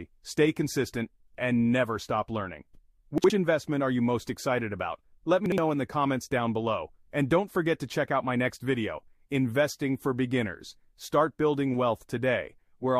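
The audio has chunks out of order at two moments, 3.18 to 3.3 s and 5.46 to 5.58 s. Each spot lasts about 120 ms and sounds briefly jumbled. Two 60 ms chunks have swapped places, because one arrived a chunk late and played after its neighbour. No sound is missing. The wrong sequence leaves hard joins at the edges and in the middle.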